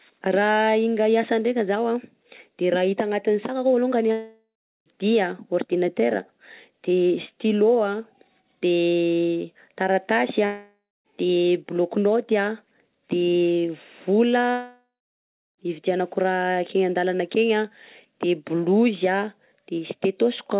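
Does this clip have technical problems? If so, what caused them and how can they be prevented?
Yes. Three long network dropouts cut the speech at 4.12–4.88 s, 10.46–11.07 s and 14.51–15.60 s. Each gap starts as a fading buzz or hiss, then turns silent before the speech resumes further on. The likely cause is lost packets whose audio was concealed and then dropped. A steadier network connection, plus forward error correction or redundant packets, would prevent this.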